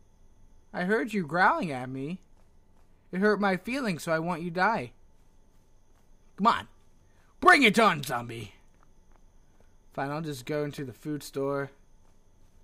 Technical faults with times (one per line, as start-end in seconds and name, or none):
10.78 block of digital silence